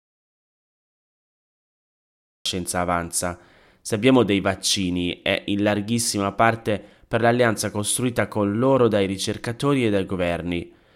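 The clip opens in dead silence, with no room tone at all, until the speech cuts in abruptly at about 2.46 s. This is an audio dropout to silence, likely a lost input or mute while the recorder kept writing silence.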